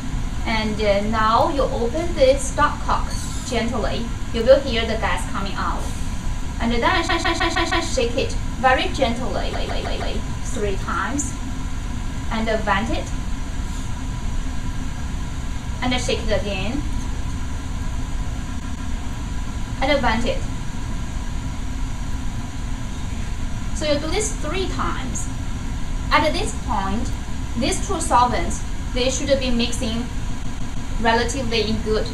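Repeated frames at 7.07, 9.52, 18.59 and 30.42 s: a 157 ms block, consistent with six compressed frames, replays two to five times, stuttering and lengthening the audio.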